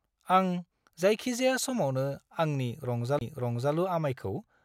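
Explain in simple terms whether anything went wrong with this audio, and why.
Right after "जायखिजाया समावनो आंनि", from 3.19 to 3.21 s, there is a CD skip: a tiny tick and a very brief mute, then the speech carries on from a different place. A simple dropout would resume exactly where it stopped. Here the disc's laser jumped to another turn of the disc.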